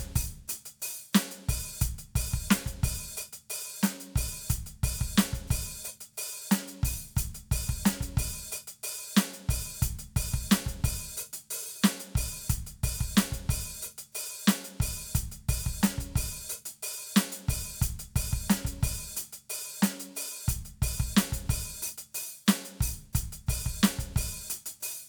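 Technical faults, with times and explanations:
No technical faults are present; the music signal stays continuous and undisturbed across the whole clip.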